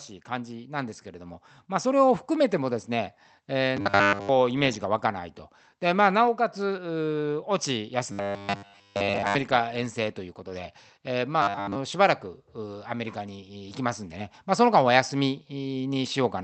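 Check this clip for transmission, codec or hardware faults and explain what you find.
Two kinds of fault show up in this speech, riding on a call-style path whose top end stops around 8 kHz.

First, automatic gain rising from 0.26 to 2.31 s: the gain control decided the input was too quiet and pushed its level up by about 8 dB. Voice and background swell together over those two seconds rather than jumping.

Second, robotic sound from repeated short buffers at 3.77 to 4.29 s, 8.12 to 9.35 s and 11.42 to 11.76 s. The voice turns into a stiff, metallic 100 Hz buzz that still loosely tracks the speech. The likely cause is audio arriving too late, so a snippet of about 10 ms gets looped while most of the real signal is skipped.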